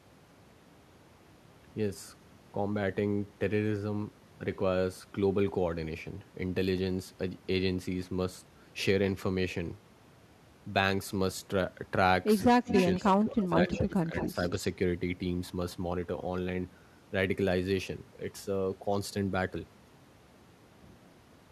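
From 12.44 to 12.73 s the speech is suppressed in double talk. The level dips sharply, by roughly 20 dB at its deepest. Both ends were likely talking at once, so the echo canceller turned everything down. Overlapping its end, from 12.67 to 12.83 s, an echo leak appears. A copy of the voice returns about 195 ms late. It is fairly loud, only a little below the speech. The far end's canceller likely failed to remove its loudspeaker pickup.

From 12.96 to 14.41 s the suppression returns. The speech drops in and out for about a second in total, by roughly 15 dB at worst. Within that stretch, two short echo leaks come back at 13.70 to 13.78 s and 14.17 to 14.27 s. Each is delayed by about 196 to 197 ms. These scraps sit well below the speech.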